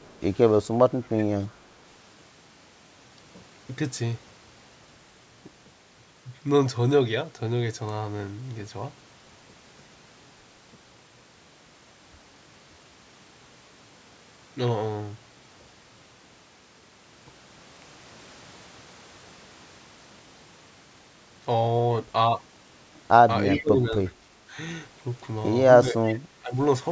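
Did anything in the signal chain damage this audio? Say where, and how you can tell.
Yes. The damage is in the call processing stage: the far end was likely on a loudspeaker, and its echo canceller let part of the returned audio through. A delayed copy, trailing by 354 ms, appears at 0.03–0.2 s, 1.17–1.24 s, 23.57–24.1 s and 26.04–26.15 s. The first is very faint, and the later ones sit about 20 to 25 dB below the direct speech. That fixed lag is the signature of echo leak.

The same canceller also shows speech suppressed in double talk. When both ends spoke at once, it likely could not tell the local talker from loudspeaker echo and turned everything down. The speech dips at 0.94–1.18 s, 23.59–23.95 s and 25.91–26.56 s, with drops of around 15 to 20 dB and roughly a fifth of a second attenuated in each stretch. These dips coincide with the echo bursts. The audio stops at 8 kHz, which fits the call microphone processing's normal band limit.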